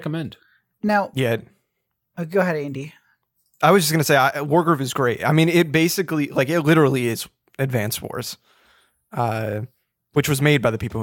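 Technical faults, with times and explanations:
No technical faults are audible.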